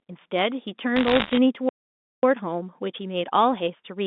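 From 0.96 to 1.37 s, bit errors on the digital phone line break through as crackle. The speech passes through a G.711 telephone path, band-limited to roughly 200 Hz to 3.6 kHz. In that stretch, bits are flipped at a rate of somewhere around one or two percent. Each flipped bit corrupts a single sample. When the sign bit or a high-order bit is hit, the sample jumps far from its true value. That gives a sharp tick. The ticks pile up into a crackle laid over the speech.

At 1.69 s the sound stops dead in mid-flow. This is a playback stall. The output stays silent for about 0.54 s, until 2.23 s. The gap is most likely caused by the player running out of buffered data, or by its audio thread being blocked. Nothing is heard during the gap. Then the audio resumes abruptly.

From 2.23 s to the end, a time-compressed catch-up follows. The player is working off the backlog the stall left behind. 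It cuts out small pieces of audio and cross-fades across the joins. The result runs about 1.1 times faster than normal, but the pitch is unchanged. The speech sounds hurried.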